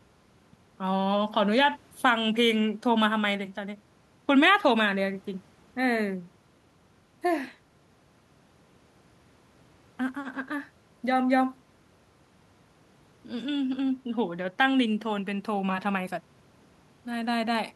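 No technical faults can be heard anywhere in the recording. Nothing in the speech stands out as a defect at any point.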